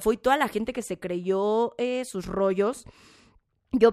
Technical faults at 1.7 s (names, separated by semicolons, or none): de-emphasis applied wrongly